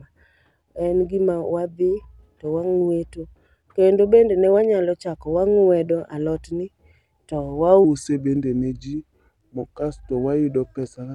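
A section at the wrong speed runs from 7.84 s to the end at 11.15 s. The speech plays at 0.838 times its recorded rate, dropping about three semitones and dragging, likely from playback against a mismatched clock, so pitch and pace fall together.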